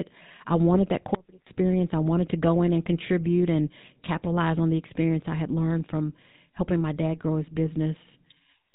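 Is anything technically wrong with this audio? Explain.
Yes. The whole clip carries the sound of the GSM full-rate codec, with plainly audible damage. This coder reduces the voice to a vocal-tract filter excited by a sparse train of regular pulses, which gives the speech its buzzy, gravelly texture, consistent with a 13 kbps full-rate stream. Nothing survives above 4 kHz, so sibilants are dull. Unlike ordinary low-pass band-limiting, which only muffles, this coder also roughens the voice itself.

From 1.15 to 1.47 s there is an audio dropout to a faint residue. For about 0.32 s the speech abruptly vanishes, leaving only a weak trace of sound roughly 25 dB below normal, and then snaps back mid-flow. The likely cause is a brief loss of the wanted signal while the path after the break stayed live. The edges are sudden, unlike a natural pause or a fade, and the faint residue distinguishes it from a true digital mute, which would leave the gap fully silent.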